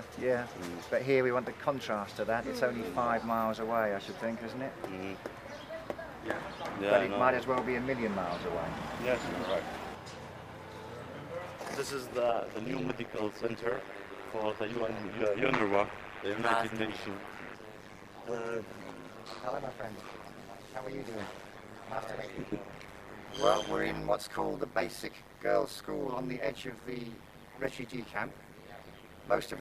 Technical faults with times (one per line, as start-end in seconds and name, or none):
12.29-29.61 overlap-add ripple